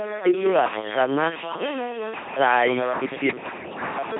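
From start to finish the speech carries heavy LPC-10 vocoder damage, consistent with the 2.4 kbit/s military codec. Each moment is resynthesised through a ten-pole vocal tract filter excited by either a pulse train or noise, never a mix, so voiced stretches turn into a flat, buzzing robotic tone and misjudged voicing decisions swap buzz for hiss. Nothing survives above 3.7 kHz, leaving the sound dull and band-limited.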